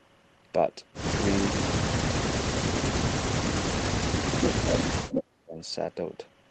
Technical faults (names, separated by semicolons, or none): speech suppressed in double talk; echo leak